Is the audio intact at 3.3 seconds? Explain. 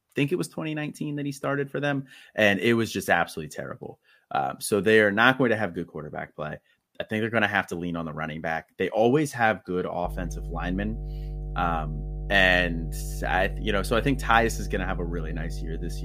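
Yes, at 3.3 seconds the speech plays through with no dropout, click, distortion or other audible fault.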